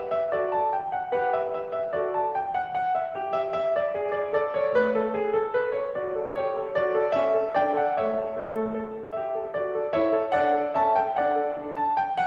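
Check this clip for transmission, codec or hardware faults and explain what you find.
Four short dropouts break up the music, at 6.25 to 6.35 s (100 ms), 8.39 to 8.55 s (160 ms), 9.03 to 9.11 s (80 ms) and 11.71 to 11.75 s (40 ms). Each sounds like sound dropped by the voice detector: the music briefly gives way to flat comfort noise, then returns. The likely cause is the sender's discontinuous transmission misjudging the music as background and pausing transmission, which fits Opus DTX behaviour.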